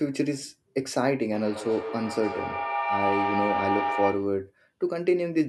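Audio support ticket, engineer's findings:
Feedback howl, 1.31–4.44 s, tone near 700 Hz, repeating about every 150 ms, peaking about 1 dB below the speech. Probable cause: two devices on the same call in one room. The mic-to-speaker loop gains level each pass, so the repeats grow instead of decaying.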